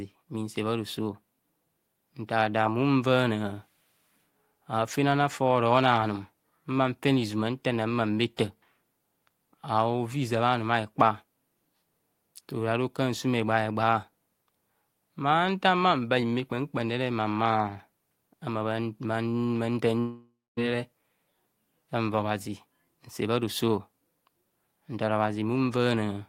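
At about 19.99 s the speech smears into a fading buzz, drops to roughly a quarter second of silence, then picks up again at 20.59 s with around 580 ms simply gone. That's most likely a long network dropout, with the receiver papering over the gap.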